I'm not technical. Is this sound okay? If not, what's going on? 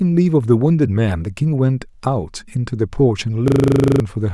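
No. From 3.48 to 4.0 s the speech turns into a rapid buzzing stutter, which is a system hang loop. The computer froze and replayed the same 40 ms snippet 13 times, losing about half a second of speech.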